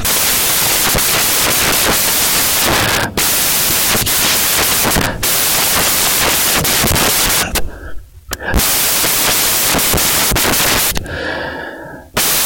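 A speech recording, but from start to finish it's buried under loud, harsh broadband noise: the samples are built from the wrong bytes, so the reader misassembles each value and the rapidly changing low bits end up dominating.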